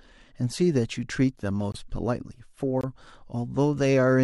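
At 1.72 s and 2.81 s, corrupt frame muted: decoder-rejected frames become abrupt 40 ms silences, consistent with about three lost frames, timing intact.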